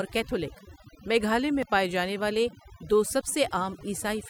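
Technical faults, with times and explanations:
Throughout, overdone noise removal: a lowered background that breaks up into twinkling specks, from noise reduction set so strong it cut quiet speech bands along with noise.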